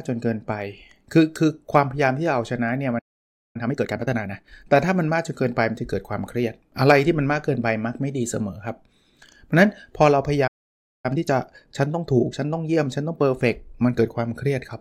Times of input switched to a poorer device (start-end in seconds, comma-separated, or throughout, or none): none